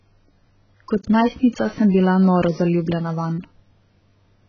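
Speech with heavy AAC compression running the whole way through. Nothing comes through above about 6.8 kHz, so the top end is just gone and everything sounds dull and smeared, with that warbly, fizzy texture on sibilants and held sounds. It's most likely low-bitrate AAC-LC, something down around 12 kbps, where the encoder drops the cut-off and starves whole bands, leaving spectral holes or filling them with substitute noise.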